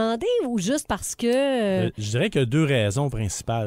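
No technical faults can be heard anywhere in this speech recording. There is nothing to place on a timeline, since no moment stands out as going wrong.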